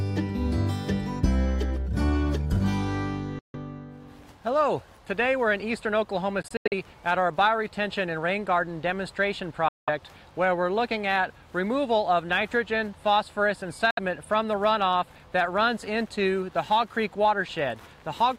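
The audio cuts to silence four times: 3.39–3.55 s, 6.42–6.74 s (broken gaps totalling 171 ms, longest 85 ms), 9.68–9.89 s and 13.91–13.99 s. These are likely Bluetooth dropouts. Unlike a buffer stall, the sound resumes further along, as if it had kept playing.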